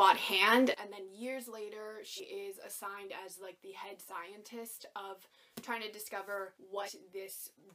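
At 0.74 s the whole level drops by about 17 dB in one go and stays down right to the end. The sound and the background noise fall together, which is the giveaway for a sudden gain jump: the digital gain changed between one sample and the next with no ramp at all. The likely cause is a gain setting or a bit shift applied instantly.

Then there are two places where compressed frames got skipped. At 2.16 s the audio leaps forward by roughly 200 ms, which fits around four 46.4 ms frames never reaching the output, either missing or thrown out by the decoder as damaged. At 6.85 s it happens again, this time about 100 ms, so a couple of frames.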